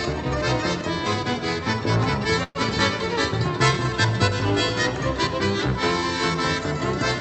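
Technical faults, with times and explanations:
2.43 to 2.57 s, call audio freeze: the sound stalls for about 0.13 s, with roughly 115 ms of smeared, fading buzz and a brief 10 ms dropout, then picks up where it left off. Nothing's lost, just delayed, so likely late packets draining the jitter buffer.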